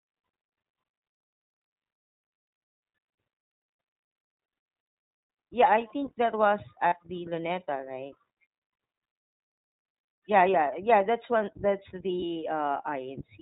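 Throughout, the iLBC codec holds the speech to narrowband, nothing above 4 kHz. Its roughness is plainly audible, which fits a 15.2 kbps mode.

At 6.88 to 6.94 s, lost iLBC frames leave a 40 ms hole. The decoder repeats the last pitch cycle with noise, giving a brief buzzy held vowel.

From 12.20 to 12.35 s, more lost iLBC frames total 80 ms, scattered over 160 ms. Each short gap buzzes, and the voice recovers almost at once.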